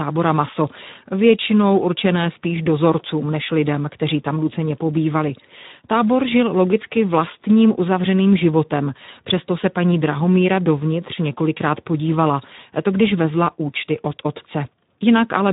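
From start to finish the speech carries Speex codec damage, plainly audible: the voice sounds hoarse and grainy because the CELP coder has too few bits for the excitation, which fits a bitrate near 11 kbps. Nothing remains above 3.8 kHz, so the sound is narrow and muffled.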